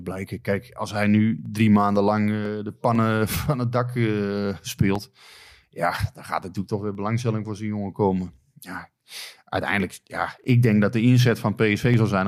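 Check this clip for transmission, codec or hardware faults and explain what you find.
One hardware-side fault is present: periodic USB or driver dropouts running from 0.45 s to 11.94 s. Roughly every 0.5 s, something stalls the USB bus or the audio driver and a fragment of audio, around half a millisecond, is skipped outright rather than filled. The waveform jumps across the gap, so each loss produces a short tick. About twenty of these ticks land at an even spacing across the speech, audible only where there is signal.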